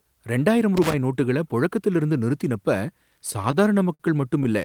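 Speech, with two faults. From 0.77 to 0.94 s there is loose connector crackle. A worn or dirty contact is chopping the signal into an irregular scratchy burst. From 3.31 to 4.01 s come repeated stalls, a stutter. Late packets emptied the jitter buffer six times. The receiver stretched the last sound to cover about 0.1 s in total, with the longest hold 53 ms. Nothing is lost, but the speech drags and stutters.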